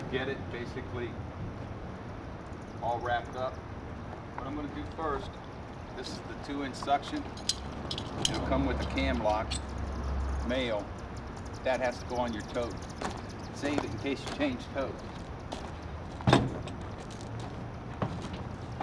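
No technical fault can be heard anywhere in this audio. There is no event to mark at any point in the clip.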